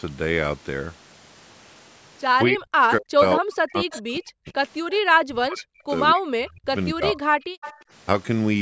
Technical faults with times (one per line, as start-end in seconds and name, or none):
2.48-4.54 speech suppressed in double talk
3.91-4.02 echo leak
4.91-4.96 echo leak
5.19-5.87 speech suppressed in double talk
6.12-7.38 speech suppressed in double talk
7.61-7.79 echo leak